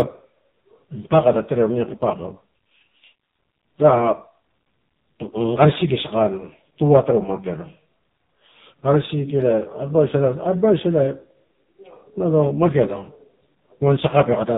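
From start to finish the speech carries AMR narrowband mobile codec damage, and it is heavy. Nothing above 4 kHz survives, so the sound is dull and boxy. The low bitrate, which fits the 5.9 kbps mode, leaves only a coarse vocal-tract model with sparse pulses, giving a buzzy, synthetic quality.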